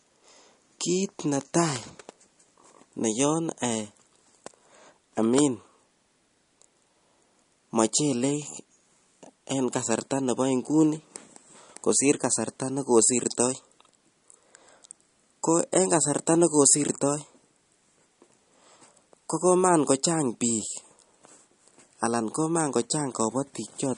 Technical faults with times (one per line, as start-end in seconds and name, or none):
0.00-23.97 MP3 compression